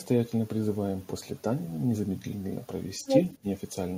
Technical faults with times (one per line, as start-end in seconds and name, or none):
3.04-3.37 other side's voice leaking through
3.41-3.46 speech suppressed in double talk